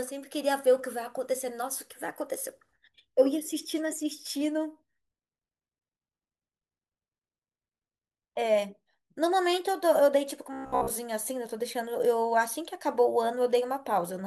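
From 10.53 to 10.92 s, new audio likely stopped arriving in time, so the playback repeated its last short buffer of roughly 15 ms over and over while the real speech in between was skipped. That is robotic sound from repeated short buffers: with most of the stretch made of repeats, the speech collapses into a rigid, metallic buzz locked at about 66.8 Hz, still loosely tracing the rhythm of the words.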